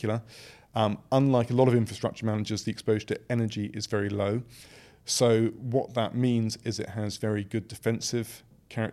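No technical faults are audible.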